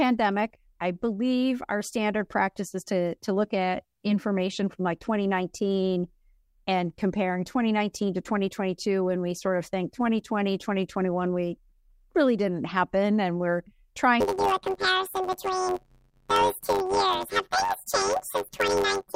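From 14.20 s to the end at 19.15 s, the speech turns into a robotic buzz at about 94 Hz, with no clear octave shift. This is planar audio read as interleaved: each 10.67 ms block, which fits a 512-sample buffer, plays twice at double speed, first one channel and then the other.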